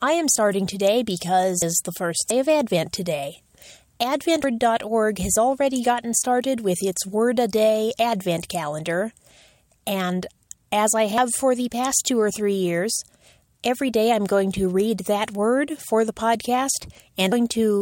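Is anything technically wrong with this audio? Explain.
Yes. At 1.62, 2.30, 4.44 and 11.18 s the sound skips ahead with no gap. This is likely a dropped buffer (overrun), where audio was overwritten before being read and the edges spliced together, losing roughly 300, 300, 150 and 100 ms respectively.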